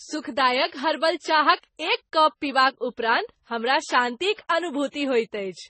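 Transcoding between lossy codecs runs throughout this speech clip: nothing sounds above about 8.4 kHz, and the smeared, swirly coding artefacts come in two distinct textures heard together. The likely cause is an AAC-LC encode at a low rate, around 24 kbit/s, later re-encoded to MP3 at roughly 35 kbit/s. The MP3 pass wastes bits reproducing the AAC damage while adding its own, and the lowest bandwidth limit in the chain stays in place.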